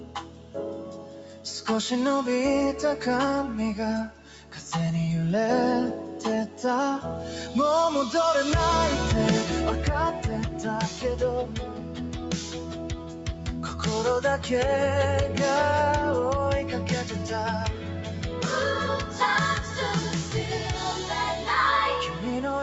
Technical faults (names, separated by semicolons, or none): noise suppressor applied to music or sounds; sound cut by the noise suppressor